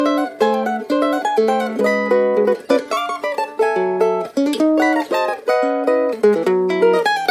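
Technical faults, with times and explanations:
Throughout: wrong sample rate. The audio runs at twice its proper speed and sits a full octave (12 semitones) high, because the samples are played back at double their intended rate without conversion, which fits 16 kHz material being played at 32 kHz.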